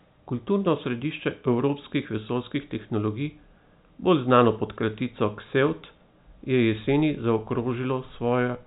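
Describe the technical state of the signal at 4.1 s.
At 4.1 s the speech is intact, with no fault, only the steady telephone-band sound of G.711 coding with nothing above about 3.8 kHz.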